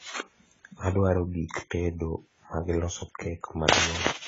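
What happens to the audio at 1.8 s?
At 1.8 s the speech sounds dull and smeared, with a fizzy, warbling edge on sibilants and nothing above 7.6 kHz, as it does throughout the clip. The likely cause is heavy AAC compression, which fits AAC-LC at around 16 kbps: coarse quantisation strips detail and the encoder cuts off the top band.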